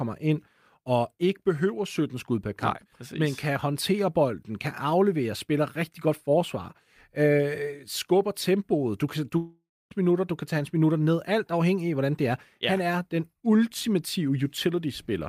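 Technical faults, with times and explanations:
9.37 to 9.94 s, long network dropout: right after "tempoet du kan du" the sound stops arriving and the last fragment is stretched into a fading buzz, leaving about 0.25 s of silence before the signal resumes at "minutter du kan tage". Roughly 0.54 s of the original audio is simply gone, with about 0.53 s papered over by the receiver's concealment. This is likely a packet stream interruption long enough to exhaust loss concealment, so the missing stretch is never recovered.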